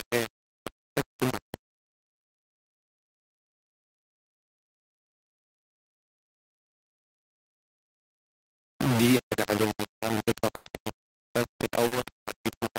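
Throughout the speech, a heavy grainy distortion follows the signal, about 10 dB below the speech itself. It is likely low bit depth without dither, close to 3 bits, rounded.

From 9.17 to 9.21 s and again from 11.87 to 11.93 s, short concealed packet loss leaves brief smears. Missing audio of 20 ms and 40 ms was filled by extending the preceding sound.

From 10.55 to 10.67 s, a burst of packet loss drops about 100 ms. The receiver continues and fades the last sound, then resumes later, skipping the lost part.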